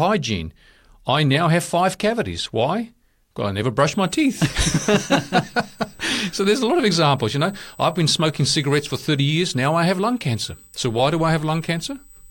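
From 3.9 s, right after "I never", a USB whine enters and stays to the end at 12.31 s. It is a steady, fixed-pitch tone at 8 kHz, strongest at its 16 kHz harmonic. It sits about 30 dB below the speech. The 8 kHz pitch matches the USB bus's 125-microsecond microframes. Current drawn in each microframe leaks into the audio through the power or ground. The result is a thin, high whistle under the speech.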